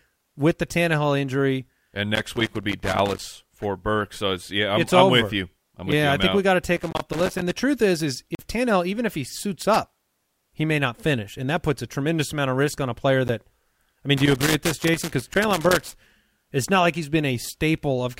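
From 2.15 to 3.19 s a loose connector crackle appears: a worn or dirty contact in the speech path repeatedly makes and breaks, chopping the signal and throwing pops off any DC on the line. It sounds like irregular scratching. On a spectrogram it shows as scattered full-height vertical streaks; the waveform shows jagged spikes and brief dropouts. The same crackle returns from 6.76 to 7.53 s, from 9.74 to 10.10 s, and longest from 14.17 to 15.94 s.

At 5.92 s a block of digital silence of about 5.5 ms cuts in. Samples were zeroed, likely because the output buffer wasn't filled in time, so the sound drops abruptly to nothing and back, heard as a tick. The waveform shows a flat line with hard edges, and the spectrogram shows a blank vertical band bracketed by broadband click lines. Further blocks follow at 6.93 to 6.95 s (20 ms, inside the second crackle), 8.35 to 8.39 s (40 ms, a short audible hole), 13.28 s (10 ms) and 15.34 s (10 ms, within the last crackle).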